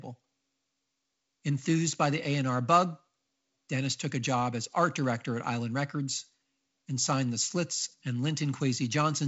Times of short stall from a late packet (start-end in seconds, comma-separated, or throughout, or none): none